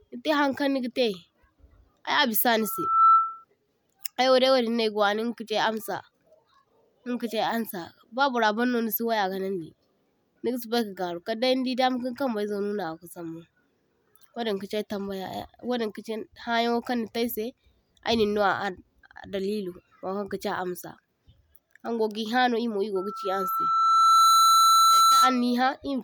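Speech with two bursts of loudspeaker feedback squeal, from 2.60 to 3.45 s and from 22.95 to 25.41 s. Both are a single 1.3 kHz tone that swells to around 10 dB above the speech. The first builds in under half a second, the second over roughly a second and a half. A microphone is hearing its own loudspeaker, and the loop gain tops one at that frequency. On a spectrogram each shows as a bright horizontal line, and the waveform envelope balloons.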